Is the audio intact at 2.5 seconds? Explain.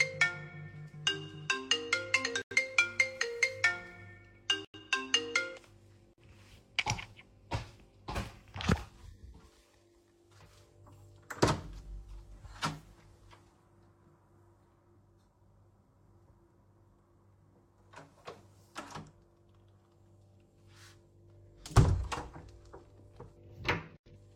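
No. Between 2.42 and 2.56 s, a corrupt frame muted fault cuts a hole in the audio. Flipped bits damaged the compressed data, the decoder rejected it, and the player filled the gap with silence. The result is an abrupt 0.14 s dropout that starts without any fade, a length that fits two codec frames of about 70 ms each. The audio resumes at 2.56 s exactly on time, with nothing shifted.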